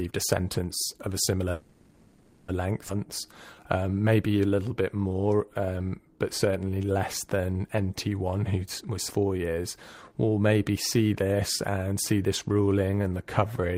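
After "sentence of a similar", a call audio freeze from 1.51 to 2.50 s fills nearly a second with a fading continuation of the last sound, likely from delayed packets. Unlike a dropout, nothing is lost; the sound resumes where it stopped.

Skip ahead jumps occur at 2.88–2.91 s, after "of a similar length", and at 9.09–9.12 s. Roughly 0.7 s and half a second of audio vanish, spliced almost seamlessly, with little gap, unlike the freeze.

Jitter buffer slow-down runs from 3.00 to 8.10 s at 89% speed, adding 581 ms, and from 9.21 to 13.62 s at 90%, adding 450 ms. Repeated pitch periods stretch sounds at unchanged pitch, rather than lowering it like a tape slowdown.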